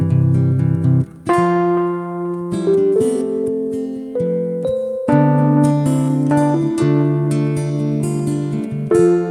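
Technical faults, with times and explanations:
No technical faults detected.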